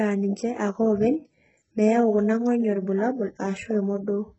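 Speech throughout with gritty, metallic sibilants and no content above 8 kHz, likely from heavy HE-AAC compression whose replicated treble suggests a very low bitrate near 8 kbps.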